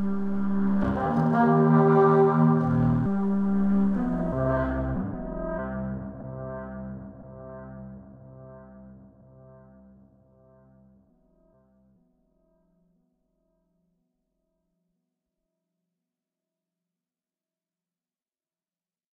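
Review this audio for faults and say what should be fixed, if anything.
Nothing here needs fixing; I didn't hear any technical faults in this recording of sounds, so it can stay as it is.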